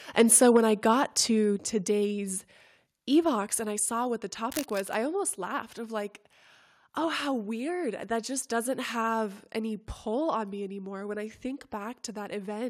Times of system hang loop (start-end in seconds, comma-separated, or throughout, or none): none